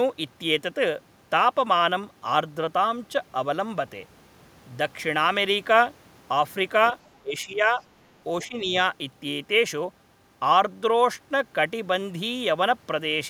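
From 7.22 to 7.82 s the speech sinks by about 15 dB in uneven patches, then dips again by about 10 dB between 8.48 and 8.74 s. This is speech suppressed in double talk, likely an echo canceller mistaking this talker for returning loudspeaker echo while the far end spoke, and ducking both. Unlike packet-loss dropouts, the audio is attenuated rather than cut to silence or glitched.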